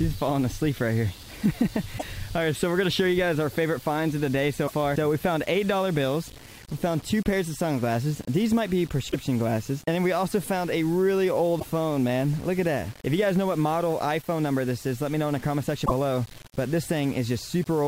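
The signal was likely quantised to very few bits, around six, with plain rounding and no dither. The result is low bit depth without dither: a grainy distortion that follows the sound, only about 25 dB below it. Damaged data in a compressed stream then makes the decoder lose frame sync at 1.95 to 2.03 s, 4.64 to 4.72 s, 9.08 to 9.15 s, 11.56 to 11.66 s and 15.82 to 15.91 s. Each event is heard as a chirp, squawk, click or short hole.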